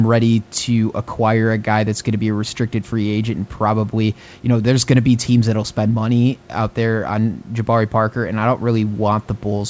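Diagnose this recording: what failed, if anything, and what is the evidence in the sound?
Nothing failed: the band stops at 8 kHz and the lowest bass is trimmed, which is what a normal wideband call path with microphone processing and a codec such as G.722 at around 64 kbps produces.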